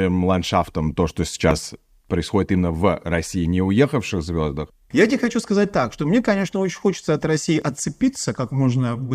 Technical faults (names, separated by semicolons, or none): dropped buffer (overrun)